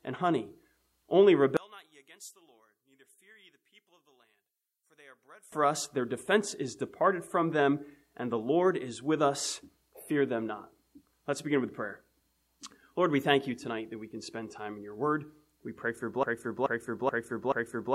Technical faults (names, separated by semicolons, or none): one channel inverted; broken-record loop